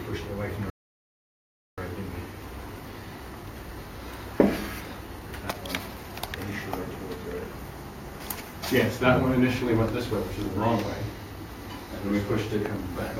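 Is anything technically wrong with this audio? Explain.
Yes, there's one problem. At 0.7 s there's a rebuffering stall: the player ran dry of downloaded audio and just waited for more. You get about 1.08 s of silence, until 1.78 s, then the sound picks up exactly where it stopped. Nothing's missing, it's just delayed.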